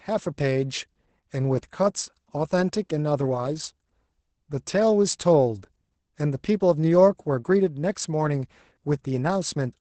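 From start to finish the speech sounds muffled, hoarse and slightly robotic, with almost nothing above 8.7 kHz. This is Opus voice compression running in its SILK linear-prediction mode at wideband, where the band stops near 8 kHz. The excitation between predicted spectral shapes is coded so coarsely that the voice turns hoarse. The heavy damage points to a very low bitrate, around 10 kbps, coded in 20 ms frames.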